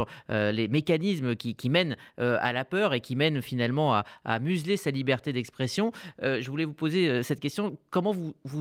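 No technical faults can be heard anywhere in the speech.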